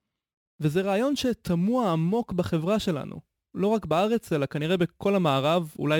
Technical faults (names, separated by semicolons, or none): crude rate conversion